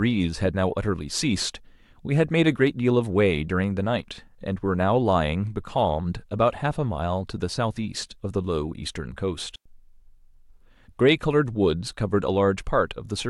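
At 9.56 s, a digital wireless dropout: the receiver mutes for about 100 ms, leaving a clean silent hole without the noise burst an analogue dropout brings.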